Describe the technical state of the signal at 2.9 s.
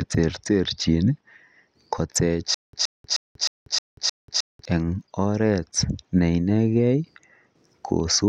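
At 2.9 s the speech is caught in a stutter with silent gaps, running from 2.54 to 4.65 s. A fragment about 122 ms long plays, then about 188 ms of dead digital silence follows. The cycle repeats every 310 ms, six times in all, giving a mechanical, even-paced stammer. The likely cause is a stalled player or stream replaying its last buffered piece on each retry. The speech that belonged in this span is lost.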